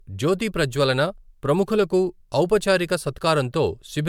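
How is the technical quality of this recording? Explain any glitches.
The recording has one fault, generation loss, present throughout. The speech sounds swirly, hollow and smeared, with blurred consonant attacks. This is likely from about four successive lossy re-encodes, consistent with 128 kbit/s MP3. Each pass lands on a shifted frame grid, so quantisation noise accumulates. A spectrogram would show flickering holes across the bands and smeared onsets, with content still reaching 20 kHz.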